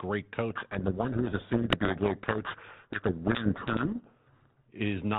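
From 0.50 s to 4.69 s the speech is buried in harsh, grinding distortion: a codec payload misread, where the receiver unpacks each G.726 code word with its bits in the wrong order and feeds the decoder wrong difference values. Unlike the light, level-following hiss of the G.726 link running at 32 kbit/s, this distortion swamps the speech outright and stops abruptly at 4.69 s, once both ends agree on the packing again.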